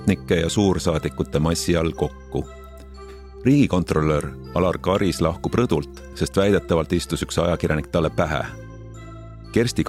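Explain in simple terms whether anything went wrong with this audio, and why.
Nothing went wrong here as far as the ear can tell, so there's nothing to flag or explain in this one.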